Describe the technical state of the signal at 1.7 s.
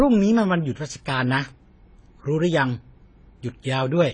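At 1.7 s the speech sounds dull and smeared, with a warbling texture and nothing above 9.9 kHz. This holds for the whole clip. The likely cause is AAC compression: the coder discards spectral detail and lowers the cut-off, which fits AAC-LC at about 24 kbps.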